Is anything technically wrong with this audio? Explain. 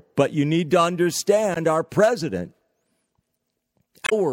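Yes. The speech has two brief glitches, at 1.54 to 1.57 s just before "our president" and at 4.04 to 4.13 s. Both come from damaged data in a compressed stream. Some of the encoded bytes at those points were corrupted, so the decoder could not read those frames properly, lost sync and had to search for the next valid frame header before normal playback resumed.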